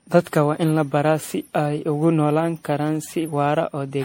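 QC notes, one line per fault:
Throughout: generation loss. The speech sounds swirly, smeared and hollow, more so than a single pass at 64 kbit/s MP3 would leave it. Consonant attacks are blurred. Nothing is heard above 16.5 kHz. The likely cause is repeated lossy coding, around ten rounds of MP3 decode and re-encode. Each pass quantises again on a shifted frame grid. So the noise and spectral holes stack up rather than staying fixed.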